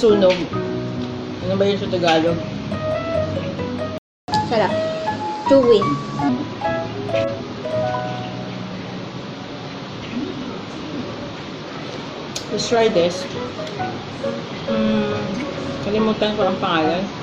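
At 3.98 s the player likely starved of data, a playback stall, so the sound cuts out for 0.30 s before resuming at 4.28 s. Catch-up at higher speed follows: the player resamples its backlog 1.15 times faster until 6.29 s, so the sound runs quicker and sits roughly two semitones sharp before settling back.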